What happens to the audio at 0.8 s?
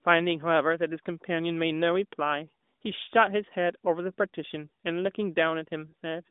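Nothing goes wrong at 0.8 s: the speech there is intact, carried through the same narrowband AMR mobile-codec path as the rest of the clip with no dropout, click or other fault at that point.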